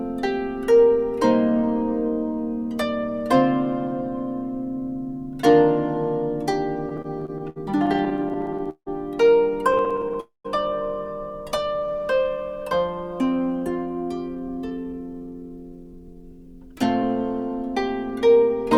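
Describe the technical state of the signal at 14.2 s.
A jitter buffer speed-up is under way at 14.2 s, running from 13.87 to 17.03 s. The receiver's buffer had built up more audio than its target, so it repeatedly cut out short slices, each one or a few pitch periods long, to drain the backlog. Across the span that trims away roughly 0.4 s, and playback runs at about 111% speed. The audio sounds rushed and compressed in time while its pitch stays unchanged.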